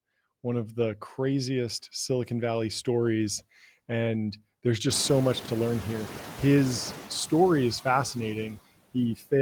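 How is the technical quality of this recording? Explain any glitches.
The recording is speech with three noise suppression faults, one running throughout and two at specific moments.

Noise suppressor artifacts run through the whole clip. The suppressor judges each frequency band, frame by frame, as steady noise or speech, and pulls the noise bands down by about 15 dB. The background therefore sinks in the pauses and swells back under each phrase. On a spectrogram the noise floor appears patchy and pumping, with isolated speckles rather than an even haze.

The noise suppressor is catching up from 4.9 to 7.02 s. Around 5 s the room noise jumps by about 24 dB, settling about 14 dB below the speech. The suppressor's noise estimate lags, so the new noise first passes with only about 6 dB of reduction, then sinks over roughly 2.12 s as the estimate adapts. A spectrogram shows a bright band of noise that fades gradually. 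The waveform shows a raised floor that tapers off.

Speech is cut by the noise suppressor between 9.15 and 9.32 s. The suppressor mistook part of the speech for noise and turned it down along with the background, by as much as about 12 dB, over about a tenth of a second in total. That portion sounds swallowed and faint. On a spectrogram the speech energy thins or drops out in short gaps. The waveform envelope shows a brief, unnatural dip.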